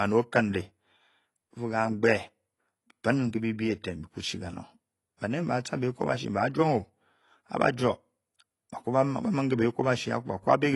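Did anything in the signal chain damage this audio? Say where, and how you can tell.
Yes, the codec. Throughout, nothing exceeds 11.5 kHz and the damage is plainly audible. Likely AAC compression, fitting AAC-LC near 32 kbps.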